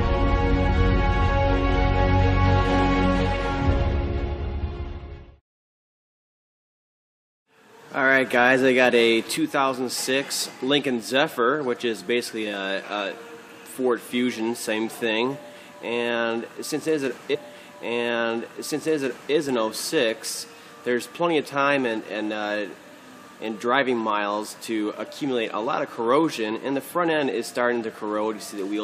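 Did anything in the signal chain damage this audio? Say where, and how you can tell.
Yes. From 17.33 s to 19.33 s, about two seconds of the audio play again, repeating the passage just before, with a small blip at 17.33 s where it jumps back. This is a stream segment repeated, a fault in the streaming and playback stage. The player fetched or queued the same segment twice and played it back to back. The repeat length matches one segment of the stream, so a whole chunk was duplicated.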